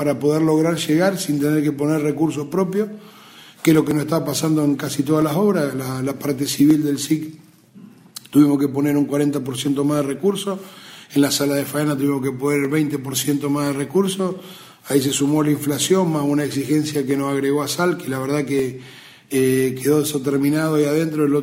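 The software likely failed to collect its samples before the hardware overwrote them, a dropped buffer (overrun), so at 3.91 s about 20 ms vanishes and the sound jumps ahead.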